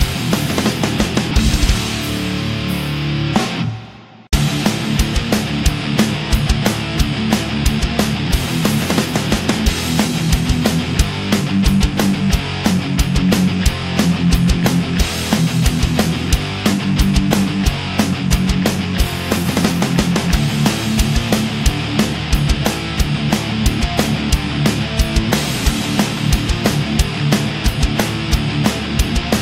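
No technical faults are audible anywhere in this recording.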